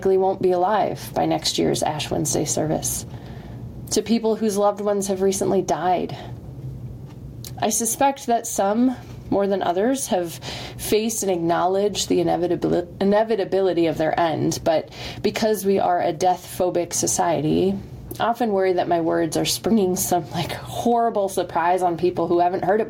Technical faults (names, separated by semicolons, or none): gain pumping